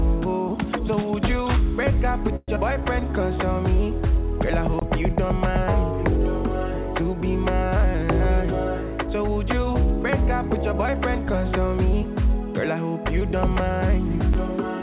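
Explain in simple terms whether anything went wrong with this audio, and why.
Several things went wrong. The audio passes through a phone-call link, which removes everything above 4 kHz and makes it sound muffled.

From 2.36 to 2.50 s there is a call audio freeze. The last sound stretches into a fading buzz or hiss. This is likely because packets arrived late, and then the audio resumes where it stopped.

At 2.56 to 2.58 s, short concealed packet loss leaves a brief smear. About 40 ms of audio never arrived, and only a short part of it was patched over.

Blocks of digital silence cut the sound abruptly to nothing, from 4.80 to 4.82 s and again at 14.34 s. Each one leaves a tick or a tiny hole.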